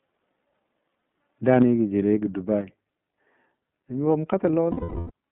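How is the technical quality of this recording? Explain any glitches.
The recording is narrowband and coded, with two dropouts, one brief overload and two sudden level drops.

Throughout, the iLBC codec limits the band to about 150 Hz to 3.6 kHz in 30 ms frames, which fits the 13.33 kbps mode. Speech sounds plainly rough, muffled and slightly synthetic.

From 0.98 to 1.01 s, lost iLBC frames, which points to a single 30 ms frame, are concealed by repeating the last pitch cycle. This gives a brief buzzy hold.

From 4.71 to 5.11 s, a 390 ms loss, roughly thirteen frames, is concealed with repeated pitch mixed with noise. It fades into a drawn-out, breathy vowel-like smear.

From 1.49 to 1.62 s, just before "jə joulegɔ", likely microphone overload drives peaks about 1 dB past the converter limit. A small fraction of samples are flattened, adding a harsh crackle.

Microphone volume stepped down twice. 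At 1.62 s, right before "jə joulegɔ", the level drops by about 4 dB. At 2.61 s, just after "jə joulegɔ", it drops by about 5 dB. Both are likely input-gain cuts by the call software, and each is heard as an abrupt loss of loudness.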